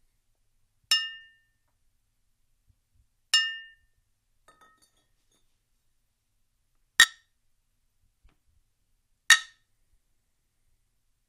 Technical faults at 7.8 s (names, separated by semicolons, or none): none